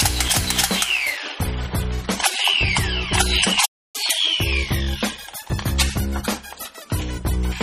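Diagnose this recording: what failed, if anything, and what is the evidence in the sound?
Adaptive stream at a lower bitrate, from 1.17 s to the end: at the network stage, the quality changes abruptly, and codec artefacts thicken with no gap. This fits the stream switching from a 128 kbit/s MP3 rendition to a 32 kbit/s one as throughput fell.

Playback stall, from 3.65 s to 3.96 s: the sound cuts out mid-flow for about 286 ms, then resumes. This is a playback buffer fault. Most likely the player's buffer ran dry while data was late, leaving it nothing to output until it refilled.

Catch-up at higher speed, from 3.96 s to 6.82 s: immediately after the stall, playback runs at 1.1 times normal speed, with pitch raised by roughly one and a half semitones, then settles back. This happens at the playback stage, where the player resamples its backlog to recover the lost time.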